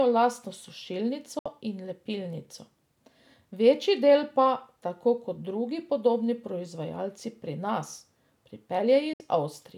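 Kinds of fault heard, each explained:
Digital broadcast dropout: at 1.39 s and 9.13 s the speech mutes within 3 ms for about 70 ms, fitting two failed frames the receiver discarded.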